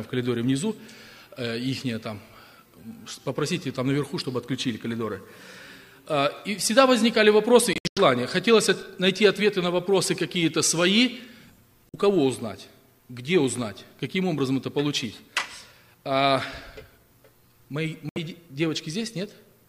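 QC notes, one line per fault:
7.73 to 7.98 s, Bluetooth dropout: a cluster of gaps totalling about 186 ms spread over 232 ms, the longest unbroken hole 93 ms; the sound cuts out and comes back, likely packets missing the headphones' deadline.
11.89 to 11.96 s, Bluetooth dropout: two lost frames totalling 46 ms; playback resumes further along, as if it had played on.
18.09 to 18.18 s, Bluetooth dropout: a 70 ms silence, same cut and skipped-ahead resumption.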